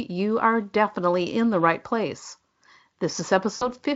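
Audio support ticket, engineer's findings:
VoIP packet loss concealed by the speech codec, 3.55 to 3.70 s. 60 ms gap, fits three lost frames. Decoder extrapolates last pitch: buzzy tone or coloured noise that fades, weak recovery.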